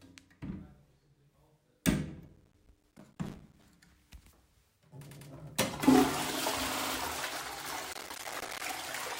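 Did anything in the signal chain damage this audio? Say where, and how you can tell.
Yes. Processor overload crackle appears at the buffer stage, from 2.26 to 3.63 s and again from 7.93 to 8.62 s. Many tiny silent dropouts pile up into a gritty tearing. Their spacing fits buffers of around 5 ms. The processor missed deadline after deadline and left gaps.

Repeated frames appear at the storage or transmission stage. At 5.09 s a 100 ms block plays twice more, adding 0.2 s. At 6.75 s a 60 ms block plays three more times, adding 0.18 s. Each repeat stutters. The compressed frames were duplicated before decoding.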